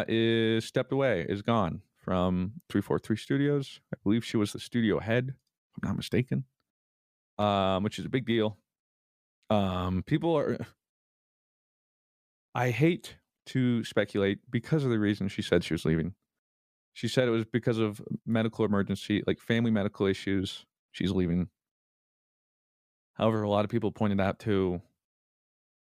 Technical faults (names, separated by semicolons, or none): none